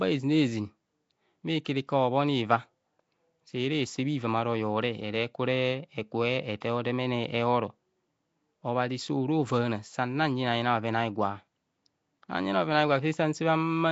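It's a speech clip, and the whole thing has a rough, hissy halo with a smeared, underwater feel. Nothing comes through above about 7.7 kHz. That points to Nellymoser compression, likely the Nellymoser Asao codec from Flash. It codes short blocks at a fixed bit budget, and the damage level fits roughly 32 kbps. Weaker bands get no bits and are filled with noise instead, which is where the hiss and murk come from. There's also pre-echo at 1.65 s and 6.61 s. At each spot a short hiss creeps in about 13 to 14 ms ahead of a sharp attack, and the attack itself sounds soft. That happens because the codec spreads its quantisation noise across the whole block, so noise sized for the loud onset also lands in the quiet moment just before it.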